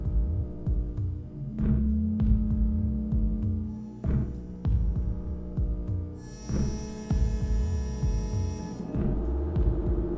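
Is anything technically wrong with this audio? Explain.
No, nothing is technically wrong; this is ordinary call audio whose content stops at 8 kHz, which fits a wideband call codec such as G.722 at 64 kbps.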